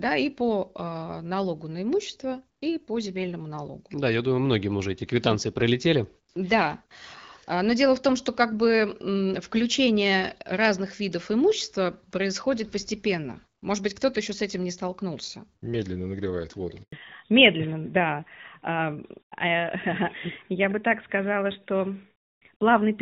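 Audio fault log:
16.82–16.92 s handover gap: right after "нагревает воду" the speech drops out for 100 ms as the call switches networks and no frames arrive. The waveform collapses to a flat line within a few tens of milliseconds, and the spectrogram shows a clean vertical blank band.
16.92 s to end, fallback to narrowband: the call leaves the lightly coded HD Voice, which suggests about 12.65 kbit/s AMR-WB, for a narrowband codec, likely AMR-NB near 12.2 kbit/s. With nothing above 4 kHz, the voice turns duller and rougher. On the spectrogram the upper band cuts off abruptly at 4 kHz.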